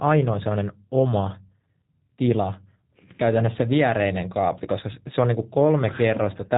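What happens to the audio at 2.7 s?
At 2.7 s the speech sounds slightly rough and synthetic, with a dull, band-limited top and nothing above 4 kHz, as it does across the whole clip. This is plainly audible G.729 codec damage, which fits an 8 kbit/s VoIP stream rebuilding speech from a vocal tract filter, pitch predictor and sparse pulses every 10 ms frame.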